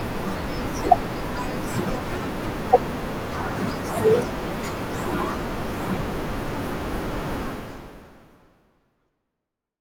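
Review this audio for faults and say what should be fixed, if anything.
No faults; nothing to fix.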